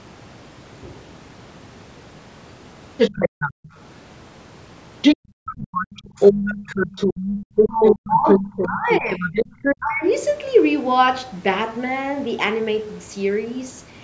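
From 2.97 to 3.69 s, the other side's voice is leaking through. It is about as loud as the talker. This is likely loudspeaker echo the canceller failed to remove.

Between 3.53 and 3.71 s, the background is gated by the echo canceller. The room sound drops by about 40 dB, then returns.

The other side's voice leaks through again from 5.01 to 9.76 s. This longer stretch is likely echo as well.

At 5.17 to 5.46 s, the gating returns with the same 40 dB drop.

From 6.06 to 6.7 s, speech is suppressed in double talk. The talker's voice sinks by around 20 dB in patches. The canceller likely ducked both voices together.

At 7.28 to 7.35 s comes a brief gate of about 13 dB.

From 7.63 to 9.35 s, double talk suppression returns, cutting the talker by up to about 25 dB for most of that span.

A short dip of similar depth follows at 9.79 to 10.03 s.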